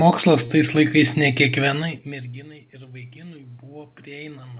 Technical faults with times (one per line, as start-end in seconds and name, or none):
0.46-0.51 short stall from a late packet
2.04-4.59 automatic gain rising